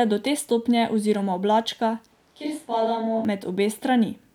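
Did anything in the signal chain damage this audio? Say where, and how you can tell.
Yes. At capture, the close microphone likely dropped out, forcing a switch to a distant microphone from 2.12 to 3.25 s, right after "te stopnje oziroma oblačka". The speech abruptly turns roomy and bass-light, about 5 dB quieter over audible room noise, then snaps back.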